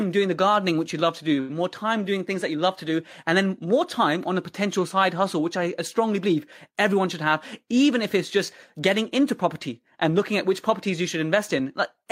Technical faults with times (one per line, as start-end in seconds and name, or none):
none